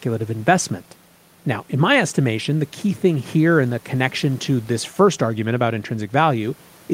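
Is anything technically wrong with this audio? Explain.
No, nothing stood out as technically wrong when listening to this speech clip.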